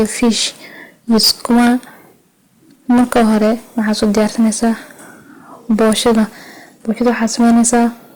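Hard clipping runs throughout this speech: overdriven by about 15 dB, roughly a tenth of samples hit the ceiling, flattening peaks into harsh fuzz on every loud syllable.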